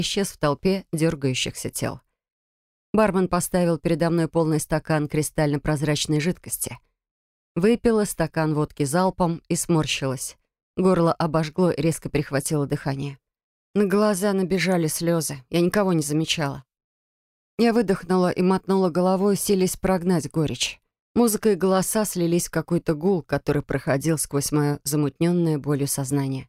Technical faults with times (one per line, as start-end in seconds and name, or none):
none